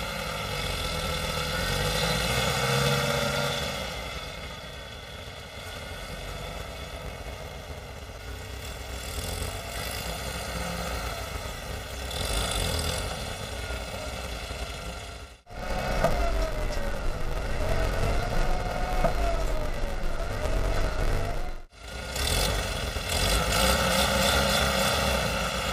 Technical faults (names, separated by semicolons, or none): planar audio read as interleaved